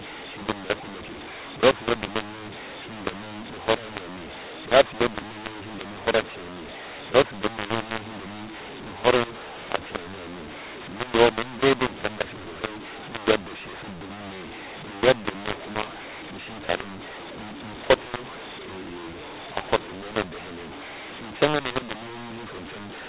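From start to finish the speech carries a mu-law and A-law mix-up: samples written as A-law are being read back as mu-law, scrambling levels so the voice sounds harsh and gritty and pauses fill with hiss. On a waveform, gaps show a raised noise floor instead of flat silence; a spectrogram shows broadband grain smeared across the band, which stops at 4 kHz as expected of telephone audio sampled at 8 kHz.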